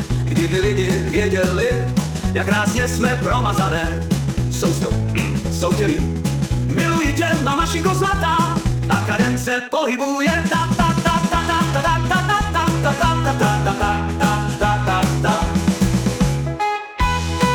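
From 0.0 to 12.76 s the audio runs in a time-stretched section, sped up about 1.49 times with pitch unchanged. It sounds rushed, and the pace shifts abruptly at 12.76 s. Software likely dropped short pieces to shorten the section.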